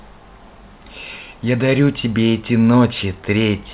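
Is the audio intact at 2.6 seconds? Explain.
Yes, the audio is intact at 2.6 seconds: no dropout, click or distortion interrupts the speech there.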